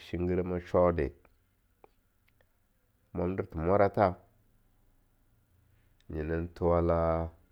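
No technical faults are audible.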